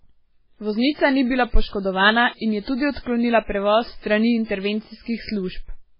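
From start to finish the speech has a hard ceiling around 5.3 kHz and a watery, swirly texture, with smeared consonant attacks: heavy damage from likely MP3 compression, where the starved encoder chops the treble and keeps dropping weak bands frame to frame, which fits a bitrate near 16 kbps.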